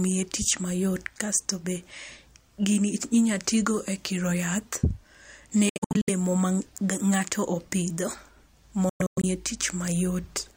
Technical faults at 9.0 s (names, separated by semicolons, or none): Bluetooth dropout